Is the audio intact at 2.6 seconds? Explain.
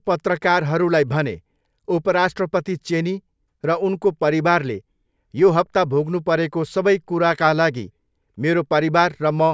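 Yes, at 2.6 seconds the speech plays through cleanly, with no dropout, click or other fault at that point.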